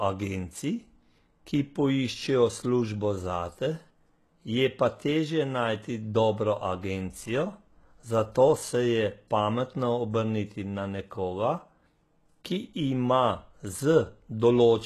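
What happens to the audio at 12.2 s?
At 12.2 s you're hearing the same HE-AAC compression that runs through the whole speech track. Nothing comes through above about 12.3 kHz, and the treble sounds copied up from lower bands and loosely shaped, so sibilants come out gritty and metallic. That likely points to a low bitrate around 16 kbps.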